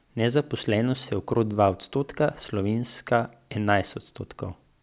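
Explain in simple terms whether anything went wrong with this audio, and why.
Nothing went wrong here: the speech signal comes through continuous and intact, with no technical faults to point to.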